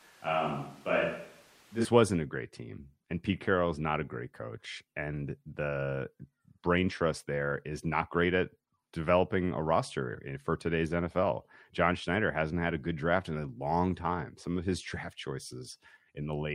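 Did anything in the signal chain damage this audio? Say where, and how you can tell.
Yes. Until 1.85 s the speech is roomy, hollow and thin in the bass, about 5 dB quieter, with room noise about 30 dB down. It then turns close and full at once: a switch to a distant microphone at capture, likely after the close mic dropped out. A spectrogram shows weak lows and reverb-smeared onsets, and the waveform steps up at 1.85 s.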